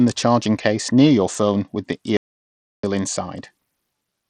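Right from the start the speech has that gritty Bluetooth SBC compression sound, treble flickering out, which fits a starved link around 80 kbps. Then at 2.17 s, just after "your phone with the", an audio dropout to silence: dead silence, no room tone, for about 0.67 s until 2.83 s, likely a lost input.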